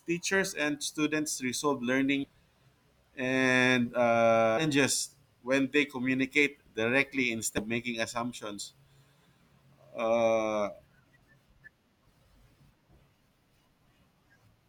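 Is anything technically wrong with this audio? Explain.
Yes. The speech jumps forward four times, at 2.23–2.28 s, 4.57–4.64 s, 7.57–7.62 s and 12.95 s, losing roughly a fifth to a third of a second each time. These are compressed frames skipped: whole 20 ms frames went missing or were rejected as damaged, so the audio skips ahead by the length of the frames left out.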